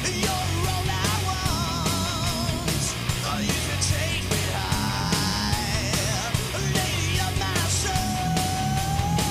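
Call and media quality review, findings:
Video or display buzz, throughout. 60 Hz buzz with harmonic hash above, strong, roughly 10 dB under the programme. Probable component: display or video cable coupling into the audio path; buzz at the picture's field rate.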